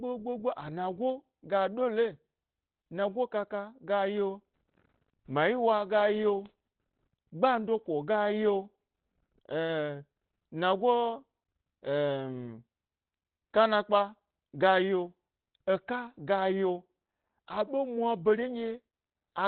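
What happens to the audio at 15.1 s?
At 15.1 s the speech carries the same heavy Opus compression damage heard throughout: muffled, hoarse and narrowband, likely from the codec's SILK speech mode at a very low rate, around 12 kbps. Unlike MP3, there is less swirling, with dull, rough band-limited tone instead.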